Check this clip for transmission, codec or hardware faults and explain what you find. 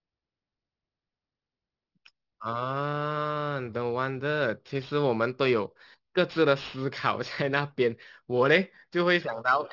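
There's one fault here, aliasing, running through the whole clip. High content folded back around 6 kHz because nothing filtered it out first, which fits an unfiltered drop to a 12 kHz rate. Sibilants come out gritty and metallic, with spurious tones sitting roughly 25 dB under the speech.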